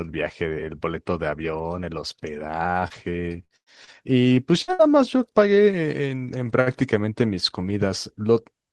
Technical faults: repeated packet loss (robotic sound); jitter buffer slow-down; burst of packet loss; short stall from a late packet

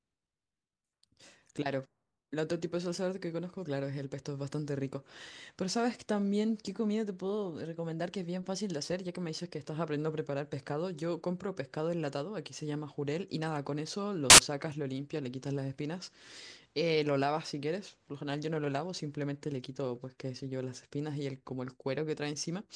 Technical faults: file tags played as audio

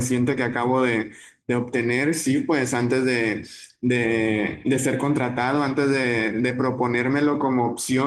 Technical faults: none

